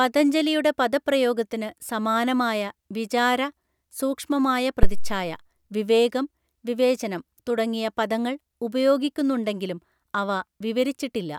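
At 4.83 s a phantom power thump appears: a supply switched on or off on a live input sends a voltage step through the coupling capacitors. A deep, near-clipping thump peaks at about -2 dBFS and dies away within roughly 100 ms, ending by 5.27 s. Unlike handling noise, it carries no rustle or friction.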